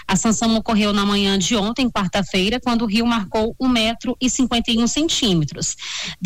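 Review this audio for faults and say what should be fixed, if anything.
No faults are audible; nothing needs fixing.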